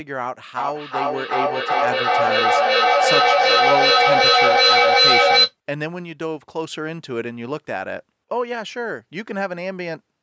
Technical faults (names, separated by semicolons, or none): feedback echo between two devices